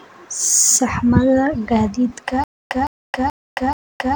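From 2.44 s to the end, stutter with silent gaps: a 160 ms fragment repeats every 430 ms, appearing as identical waveform bursts between flat silent lines, likely from a stalled stream.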